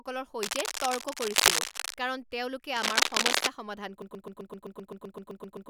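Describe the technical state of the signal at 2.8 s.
A worn cable or connector was likely moved, its contact resistance fluctuating rapidly, causing cable scratch noise from 2.77 to 3.47 s: loud, uneven scratching over the speech.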